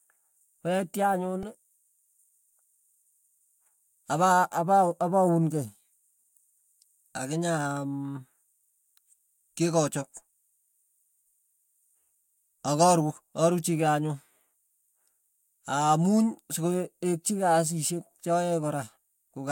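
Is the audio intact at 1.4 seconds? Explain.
No, there is a repeated buffer at 1.43 s. Fresh audio did not reach the output in time, so the device replayed its last block four extra times. Each block lasts about 1.33 ms, which fits a 64-sample buffer, and essentially no audio is lost. Because the block is so small, the speech is heard as a brief click or buzz rather than a stutter. On a waveform, one short cycle repeats identically with abrupt joins. On a spectrogram, a thin vertical broadband line appears there.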